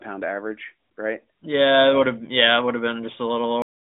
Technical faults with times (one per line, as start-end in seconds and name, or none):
3.62-4.00 cut-off end